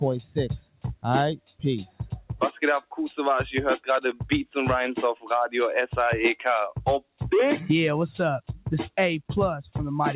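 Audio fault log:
Throughout: noise suppressor applied to music or sounds. Held tones and tails pump and thin while attacks mostly get through. A speech-tuned suppressor treats sustained content as noise, so its gain swings by roughly 10 dB, heard through a band that stops at 4 kHz.
0.69–1.04 s, 1.37–1.63 s, 5.15–5.30 s: sound cut by the noise suppressor. The sound sinks, by about 17, 18 and 15 dB at deepest, each dip lasting a few hundred milliseconds or less. The suppressor misjudges these sounds as noise and ducks them hard.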